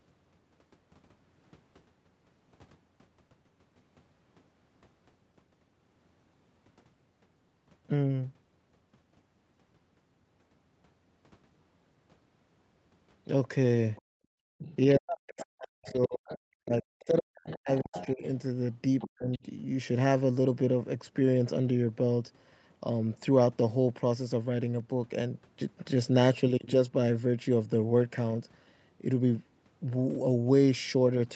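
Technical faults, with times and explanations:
13.96 to 19.39 s, other side's voice leaking through: a second voice is heard faintly at 13.96 to 14.02 s, at 14.58 to 14.76 s, then more clearly at 15.38 to 16.39 s, 17.47 to 18.08 s and 18.99 to 19.39 s. It sits from about 30 dB down to about 15 dB below the main talker, likely loudspeaker playback the echo canceller did not fully remove.
14.02 to 14.58 s, background gated by the echo canceller: room sound drops by up to about 35 dB for roughly half a second, because the canceller clamped the microphone while the loudspeaker played.
14.96 to 18.23 s and 19.07 to 19.42 s, speech suppressed in double talk: the talker dips by roughly 40 dB, for about 2 s in total in the first span and about 0.3 s in the second, likely because the canceller attenuated everything when both sides spoke together.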